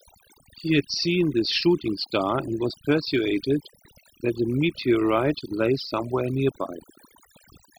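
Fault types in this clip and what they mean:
overdone noise removal: Across the whole speech clip the background drops and breaks up into twinkling specks, and the voice has its quieter edges thinned away. A noise reduction stage was pushed too hard. Any frequency band that sat close to its noise estimate was pulled far down or switched off entirely, so the low-level detail of the voice was stripped out along with the noise.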